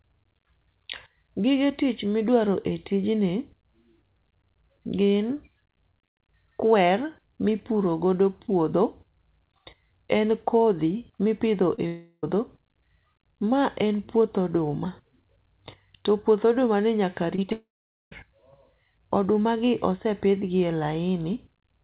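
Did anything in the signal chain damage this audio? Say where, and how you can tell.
Yes, the damage happened on the network leg of the call. The call path's G.711 mu-law coding caps everything at 4 kHz, but that band limit is normal for the codec and not a fault.

Short concealed packet loss shows up at 11.75 s, 11.77 to 11.79 s, 17.36 to 17.39 s, 17.42 s and 17.50 s. Each gap is 10 to 20 ms of audio that arrived too late, and the decoder patched it by extending the preceding sound. You hear these as tiny smears or wobbles. On a spectrogram each one is a brief stretch of frozen, smoothed harmonics where the speech texture should keep changing.

There are two long network dropouts, the likely cause being a burst of lost packets. The first runs from 11.87 to 12.24 s. The receiver keeps synthesising a decaying buzz or hiss for most of that time, then leaves about 60 ms of silence. The second runs from 17.52 to 18.12 s. 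Its continuation fades out and then gives way to roughly 0.47 s of silence. The waveform shows the fading tail followed by a flat line, and the speech resumes afterward with that stretch missing.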